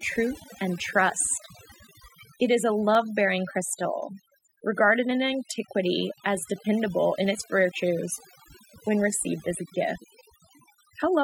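It's a speech recording with heavy-handed noise removal running the whole way through: the background drops and breaks up into little twinkling specks, because the reduction is chopping out any frequency band sitting near its noise estimate, quiet voice detail included. On top of that there's a regular click about every 1.08 s, starting right after "truth and" at 0.80 s and continuing through 10.49 s, roughly ten in all. That steady spacing points to clock drift buffer slips, likely two devices on separate clocks disagreeing by something like 150 ppm, so the buffer periodically drops or repeats a handful of samples.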